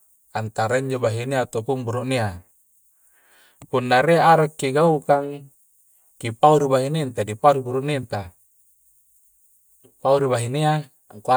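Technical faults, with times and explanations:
No technical faults detected in the speech; nothing to report.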